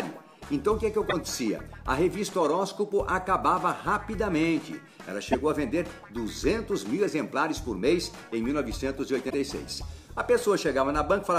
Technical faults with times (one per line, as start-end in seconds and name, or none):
1.09-1.13 damaged data in a compressed stream
5.32-5.35 damaged data in a compressed stream
9.26-9.34 damaged data in a compressed stream